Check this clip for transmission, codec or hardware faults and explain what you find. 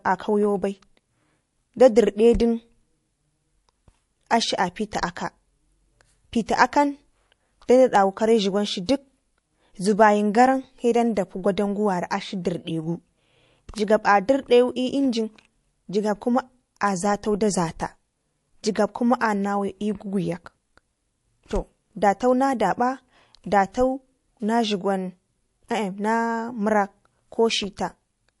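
Three kinds of fault are audible in this speech recording: compression damage throughout, four pre-echoes, and three isolated clicks.

Throughout, the treble is dulled and the sound is watery and swirly, with chirpy sibilants. This is likely MP3 compression at a low bitrate, around 48 kbps, cutting the top end and switching weak frequency lines on and off.

At 6.46, 7.67, 8.86 and 11.15 s there is pre-echo: a hiss about 11 to 14 dB above the background, lasting 18 to 27 ms, leads each sharp onset. The encoder's long transform blocks spread quantisation noise backwards ahead of the attack. It differs from a click because the noise comes before the attack and is tied to it.

At 7.95, 13.78 and 16.88 s there is a bit error spike: one sharp tick with no relation to the sound around it. A flipped bit makes a sample jump and return at once. The tick is broadband and has no lead-in hiss, which sets it apart from pre-echo.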